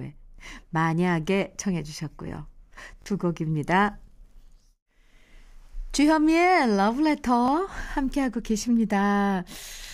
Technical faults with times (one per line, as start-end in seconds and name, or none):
3.02-3.06 repeated buffer
7.46-7.48 repeated buffer